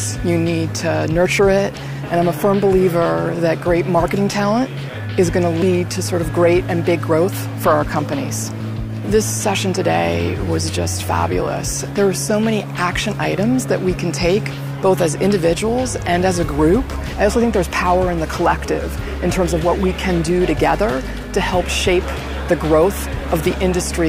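No technical faults can be heard anywhere in the recording.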